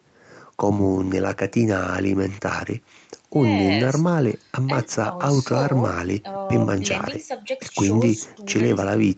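No technical faults can be heard in this speech recording. It carries the sound of a working call path, with the microphone processing and the Opus codec leaving nothing above 8 kHz.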